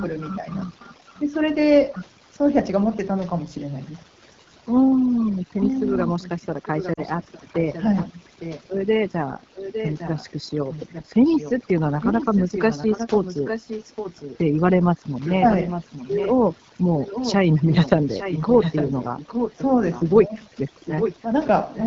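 Throughout the speech, overdone noise removal has pulled bands that sit near the noise floor down to nothing, so the background is near silent with twinkling specks. On a spectrogram the gaps between words look blank apart from scattered isolated dots, and the weaker harmonics break into patchy islands.

The whole clip also carries the AMR wideband (HD Voice) codec, with plainly audible damage: the voice is rough and raspy, which fits the 8.85 kbit/s mode. A spectrogram would show crisp structure only up to 6.4 kHz and a smooth noise-like band from 6.4 to 7 kHz, with nothing above.

From 0.57 to 1.21 s a faint delayed copy of the speech, about 25 dB down, trails the original by roughly 0.86 s. This is echo leak, likely a loudspeaker's sound reaching the far microphone and passing an incomplete echo canceller. It returns from 5.55 to 8.64 s at about 5 dB below the speech, and again from 9.55 to 14.38 s, 15.25 to 16.34 s, 16.99 to 20.03 s and 20.76 to 21.86 s, at about 10, 10, 5 and 5 dB down. 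On a spectrogram each stretch shows the speech pattern repeated, fainter, shifted about 0.86 s later.

At 6.93 s, inside the second echo stretch, 40 ms of lost AMR speech frames leave a brief drop toward near silence where the decoder repeats the last good settings at falling gain before recovering. In the waveform this appears as a short sagging, smeared segment.

From 8.1 to 8.17 s, speech suppressed in double talk makes the voice dip by about 15 dB for some 70 ms while the echoed speech is loud. The canceller likely could not separate talker from echo and turned both down. The waveform shows a brief notch cut into the envelope.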